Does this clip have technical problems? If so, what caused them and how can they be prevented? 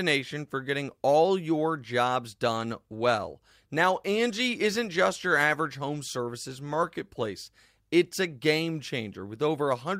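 No, there's nothing technically wrong to hear in this speech clip, so there's nothing to trace back or guard against here.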